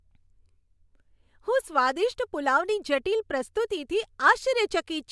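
Speech recording with no technical faults to be heard.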